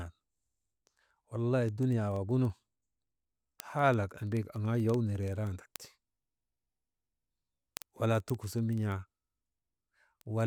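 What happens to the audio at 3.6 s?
At 3.6 s the speech sits inside a run of word clock ticks lasting from 0.10 to 10.45 s. A receiver running on its own clock, roughly 400 ppm off the sender's, slips one sample about every 0.05 s, giving sharp, uneven ticks. A spectrogram shows evenly spaced thin vertical broadband lines, and the waveform shows single-sample glitches.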